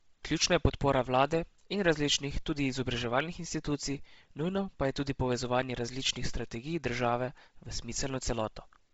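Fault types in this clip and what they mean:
Bluetooth LC3 compression: the speech carries a heavy breathy, grainy edge throughout and nothing above 7.7 kHz, likely from Bluetooth LE Audio's LC3 codec. The damage fits a low bitrate near 24 kbps and 7.5 ms frames, with upper detail zeroed and noise-filled.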